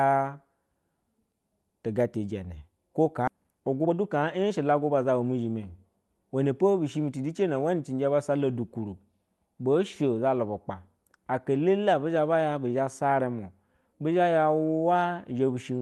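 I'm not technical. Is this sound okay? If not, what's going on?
No. There are two problems close together, early in the speech.

The first is a skip ahead, at about 3.27 s. Roughly three quarters of a second of speech is simply missing. The call system threw away a chunk of sound because newer sound was already waiting to play. Nothing fills the hole. The speech before and after is joined straight together, so it jumps forward with almost no pause.

Right after that comes a jitter buffer speed-up, from 3.37 s to 5.12 s. The system was holding too much waiting sound, so it snipped out many tiny slices to catch up. About a third of a second was removed this way. The speech plays roughly 15 percent faster but at the same pitch. It sounds rushed rather than squeaky. The sound travels over an ordinary internet call connection, which is what made these adjustments.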